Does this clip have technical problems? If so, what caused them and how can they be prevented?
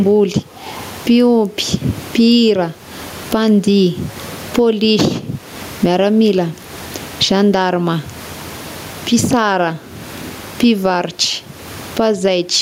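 Yes, there's gain pumping all the way through this speech, with the gain swinging roughly 20 dB; the room noise sits about 37 dB under the talker. That's likely a fast limiter clamping input gain that's set way too hot. Drop the mic gain so the limiter rarely kicks in.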